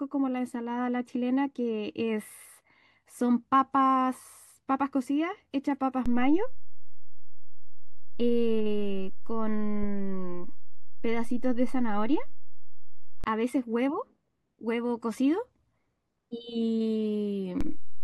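The zero line of the waveform jumps by about -23 dBFS at 6.06 s and returns at 13.24 s, then shifts again by about -21 dBFS from 17.61 s to the end. Each DC step lands as a low thump or click while the speech continues unchanged.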